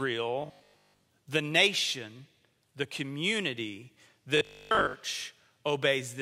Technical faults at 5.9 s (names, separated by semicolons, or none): none